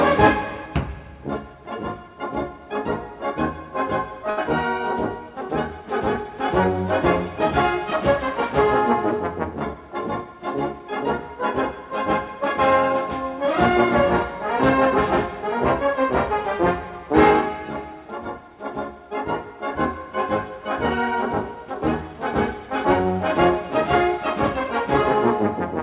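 At 4.30 to 4.39 s there is a short stall from a late packet. The jitter buffer ran dry, so the last sound is stretched for about 71 ms, with a faint buzzy hold, before resuming exactly where it stopped. Unlike a lost packet, nothing is skipped.

From 9.74 to 10.89 s a jitter buffer speed-up trims surplus delay by repeatedly cutting tiny pitch-period slices, about 70 ms in all. The sound runs roughly 6% fast and feels hurried. Unlike a pitch shift or resampling, the pitch stays the same. All of this sits in narrowband audio with nothing above 4 kHz, which fits a G.711-type call codec.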